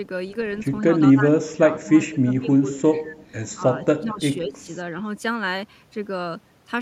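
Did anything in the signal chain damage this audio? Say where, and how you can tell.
Yes. Speech suppressed in double talk, at the call-processing stage: the speech dips by up to about 25 dB at 1.0–3.18 s, 3.56–4.21 s and 4.48–4.68 s, likely an echo canceller turning down the near talker while the far side spoke.

Echo leak, also in call processing: faint copies of the speech trail 202 ms behind at 2.70–2.79 s and 3.21–3.26 s, about 15 and 35 dB down, likely loudspeaker echo that escaped cancellation.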